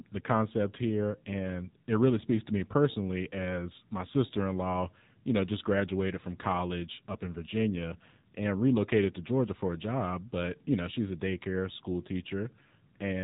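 From start to finish, the speech carries AMR narrowband mobile codec damage: everything above 3.8 kHz is gone, and the low-bitrate vocal-tract model makes voicing plainly buzzy and synthetic, which fits a rate near 7.4 kbps. A spectrogram shows a hard ceiling at 3.8 kHz.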